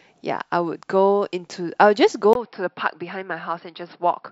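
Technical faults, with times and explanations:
2.33 to 4.32 s, input switched to a poorer device: after a brief 20 ms gap, the speech turns dull and boxy, with nothing above 5.5 kHz. It drops to around 5 dB quieter and carries a faint new background noise, roughly 55 dB under the speech, that continues to the end. The recording likely moved mid-take to a different, narrower-band microphone or a headset call profile, which brings its own bandwidth, level and noise floor.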